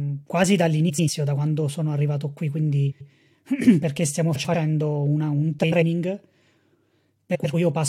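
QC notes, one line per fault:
0.89–1.09 s, 2.91–3.10 s, 4.35–4.55 s, 5.63–5.83 s, 7.35–7.54 s: frames out of order. Two roughly 93 ms halves, which fits four-frame runs, play swapped, giving garbled flutter. Unlike a dropout, no time is lost.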